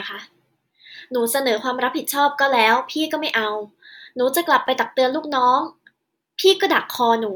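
At 4.66 to 4.68 s there's a quick jumble: chunks out of order. One 10 ms chunk landed a chunk late and plays after the one that should follow it. Nothing's missing, but the swap leaves three hard joins, so you hear a brief scrambled moment in the speech.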